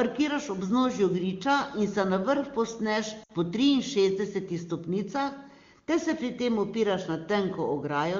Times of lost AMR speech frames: 3.23-3.31

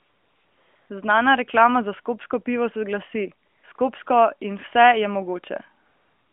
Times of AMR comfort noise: 0.00-0.90, 3.48-3.78, 4.04-4.06, 5.86-6.33

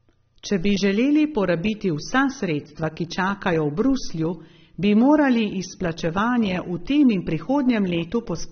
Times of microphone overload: none

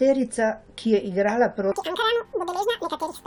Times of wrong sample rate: 1.72-3.27

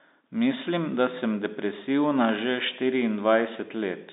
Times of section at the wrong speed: none

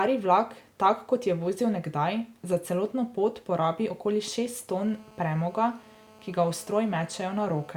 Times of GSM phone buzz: 4.73-7.72

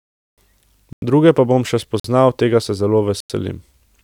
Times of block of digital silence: 0.93-1.02, 2.00-2.04, 3.20-3.30

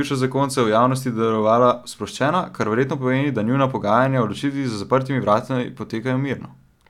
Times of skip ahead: none

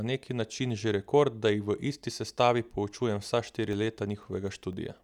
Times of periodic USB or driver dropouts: 2.98-4.98

